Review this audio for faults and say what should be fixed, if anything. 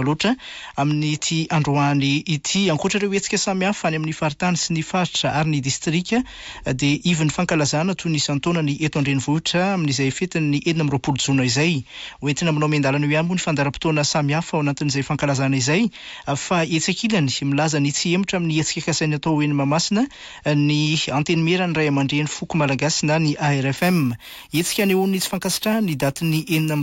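From 23.78 s to the end at 26.82 s there's imaging from sample-and-hold upsampling. The audio picks up a bright, metallic fizz that tracks the level of the sound. It points to a 16 kHz source raised to 44.1 kHz by repeating samples with no smoothing. That leaves mirrored copies of the spectrum, the first filling 8 to 16 kHz at about 16 dB below the signal, and moving opposite to the pitch. To prevent it, resample that section with a proper band-limited interpolation filter instead of sample repetition.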